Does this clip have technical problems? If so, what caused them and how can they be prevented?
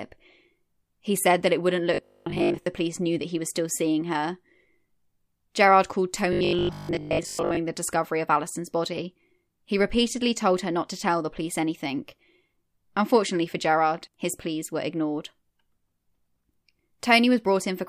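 Yes. Robotic sound from repeated short buffers occurs from 1.94 to 2.66 s and from 6.33 to 7.59 s. The speech turns into a rigid, metallic 50 Hz buzz. This likely comes from starved buffers replaying the last 20 ms, skipping most of the real audio. A larger buffer or steadier audio delivery prevents it.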